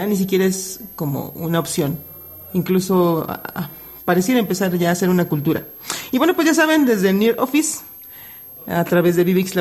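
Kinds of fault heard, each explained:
Switching supply whistle: a switching power supply, running in an audible burst mode or beating against another converter, leaks a thin high whistle into the audio. It persists throughout, wandering between about 12.4 and 12.7 kHz, roughly 20 dB below the main signal.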